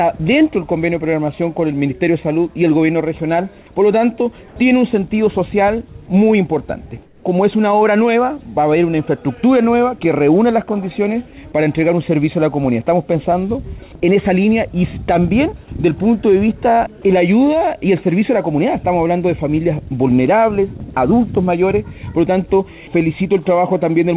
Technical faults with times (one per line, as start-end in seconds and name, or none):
7.06-7.24 comfort noise in place of the background